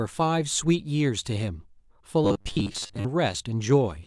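Speech, with a robotic sound from repeated short buffers at 2.25–3.05 s: a rigid 100 Hz buzz, about half repeated audio, likely from 10 ms buffers starving.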